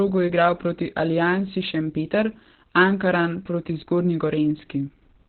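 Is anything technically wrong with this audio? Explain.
Yes. Throughout, the speech sounds muffled, hoarse and slightly robotic, with nothing above 4.4 kHz. This is heavy Opus voice compression: its narrowband SILK coding, which fits roughly 8 kbps, quantises the excitation coarsely.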